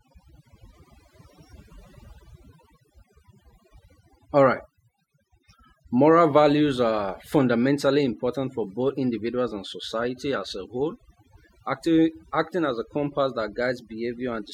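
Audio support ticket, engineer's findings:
Speech throughout; background dropped, broken into twinkling specks. Overdone noise removal: suppressor set too strong, gating bands near noise estimate, quiet voice detail lost.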